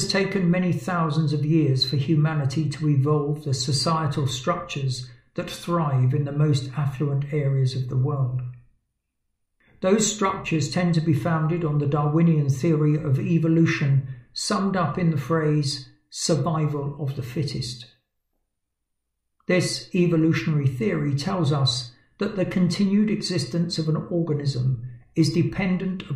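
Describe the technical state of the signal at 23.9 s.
At 23.9 s the signal is intact, with no audible technical fault at that point.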